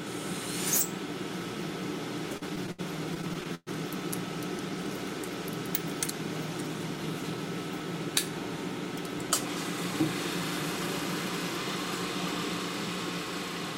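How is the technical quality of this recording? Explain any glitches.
The recording has two clear timing glitches, both from a network receiver handling late packets.

Repeated stalls (stutter), 2.37 to 3.69 s: packets arrived late, so the buffer ran dry twelve times. The last sound was stretched to cover about 313 ms, up to 119 ms at once, producing audible dragging and hiccups.

Jitter buffer speed-up, 6.90 to 7.47 s: the buffer held excess audio, so the receiver trimmed about 70 ms of short pitch-period chunks, making the sound run at 109% speed, briefly hurried but unchanged in pitch.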